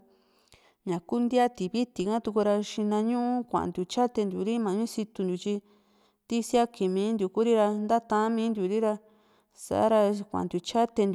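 No technical faults can be heard anywhere in the speech recording. Nothing in it calls for a timestamp or an account of something going wrong.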